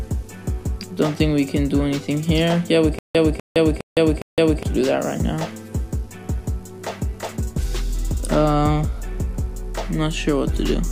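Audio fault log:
2.99–4.63 s, stutter with silent gaps: one 248 ms fragment plays four times on an even 410 ms cycle, each followed by 162 ms of digital silence, likely a stalled stream retrying its last buffer. Unlike a plain dropout, the same burst recurs, and the intended audio is lost.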